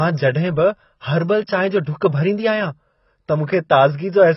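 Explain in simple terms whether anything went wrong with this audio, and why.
The speech was likely squeezed hard by AAC compression, which discarded everything above 5.8 kHz, so the sound comes out dull, smeared and warbly throughout. At 1.84 to 1.87 s, the codec spread its noise ahead of a sudden sound. This fault is called pre-echo: a brief hiss arrives just before the attack, which then sounds softened.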